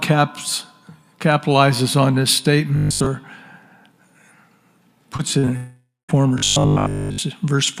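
Robotic sound from repeated short buffers, 2.76 to 3.06 s: a rigid, metallic 50 Hz buzz replaces most of the stretch, likely from one 20 ms buffer repeating while fresh audio arrives too seldom.

Short concealed packet loss at 5.17 to 5.21 s, then 5.39 to 5.49 s: brief gaps of 20 to 40 ms are bridged by continuing the preceding sound, heard as a quick smear or wobble.

Long network dropout, 5.57 to 6.10 s: about half a second likely never arrived. The filled-in sound fades, leaving roughly the last 0.2 s silent before audio resumes further on.

Robotic sound from repeated short buffers again, 6.38 to 7.18 s: the whole stretch likely becomes the same repeated 20 ms cycle, a steady 50 Hz metallic buzz.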